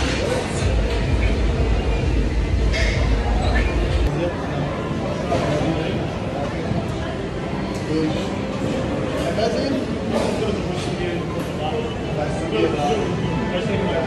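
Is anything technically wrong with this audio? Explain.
No, no technical faults here.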